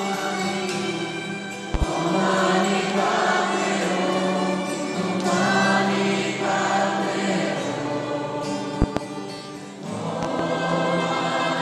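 Loud pops occur at 1.74 to 1.85 s, 8.82 to 9.00 s and 10.23 to 10.43 s. Each is a pair of sharp pops in quick succession, peaking about 15 dB above the audio at the first and last points and about 20 dB at the second, while the sound carries on underneath. The likely cause is a sudden voltage step or pulse, such as from a plug, switch, static discharge or driver glitch, entering the signal path.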